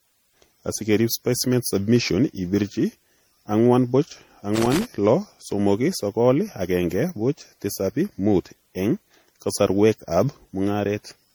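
Generation loss runs through the whole clip: the speech sounds swirly, smeared and hollow, with blurred consonant attacks, more than one lossy pass would leave. The likely cause is repeated decoding and re-encoding, about five times, in a format that fits MP3 at around 64 kbit/s. Each pass requantises on a shifted frame grid, so noise and spectral holes pile up, though content still reaches about 20.9 kHz.

Loose connector crackle appears from 4.55 to 4.85 s as a short, irregular burst of scratchy crackle. A worn or dirty contact was rapidly making and breaking as it moved, chopping the signal into fragments.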